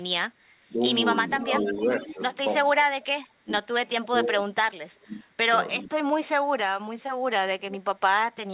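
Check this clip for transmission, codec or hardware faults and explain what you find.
The call has echo-canceller trouble: gating, double-talk suppression and leaked echo. The audio is band-limited at 4 kHz, which fits a narrowband G.711-style call path.

Background gated by the echo canceller, 0.33 to 0.39 s: the canceller clamps the mic while the far end plays, so the room sound dips by about 9 dB, then recovers.

Speech suppressed in double talk, at 0.67–0.81, 1.72–1.91, 2.13–2.2, 2.87–3.69 and 3.99–5.36 s: the speech dips or chops out, from a few dB to roughly 30 dB in the longer stretches. The likely cause is the canceller ducking everything because it can't separate the talker from loudspeaker echo.

Echo leak, 1.33–2.14 s and 7.6–7.79 s: a copy of the speech trails about 0.46 s behind, around 10 dB down at first and 20 dB down later. That's likely a speakerphone whose canceller let residual echo through.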